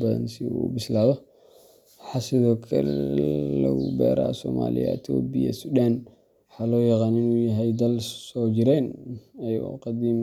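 No technical faults can be heard anywhere in the speech recording, with the signal holding steady in level and continuity throughout.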